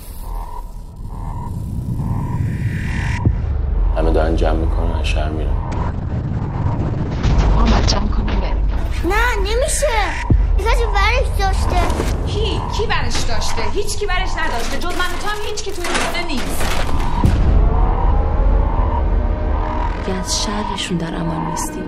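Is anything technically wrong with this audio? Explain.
Yes. From 5.73 s to 11.83 s there is a call bitrate drop: the encoder was starved of bits, consistent with a fall to roughly 7 kbps, and the bandwidth shrank from 20 kHz to 8 kHz. The audio turns muffled and rough, worst for about 2.3 s, yet it never drops out, unlike packet loss.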